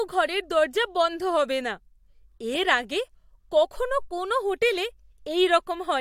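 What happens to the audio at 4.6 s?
Nothing goes wrong at 4.6 s; the speech carries on intact through that moment, with no dropout, click or distortion.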